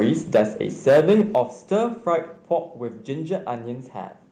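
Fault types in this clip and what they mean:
Microphone overload: The sound has that flat-topped, crackly edge you get when peaks slam into the converter's ceiling, most likely because the mic input is set too hot. There's a light touch right at the start, up to 0.05 s, about 1 dB over, then a harsher burst from 0.34 to 0.42 s, about 5 dB over, and the worst stretch from 0.87 to 1.41 s, about 7 dB over, with roughly a tenth of the samples squared off there.
Microphone volume stepped down: The whole signal, background included, suddenly drops a notch in level, which points to the call software likely reacting to the overload by turning the device's input down in one jump. It happens three times: at 0.35 s by about 2 dB, in the middle of the second distorted burst; at 1.35 s by about 7 dB, near the end of the long clipped stretch; and at 2.37 s by about 3 dB.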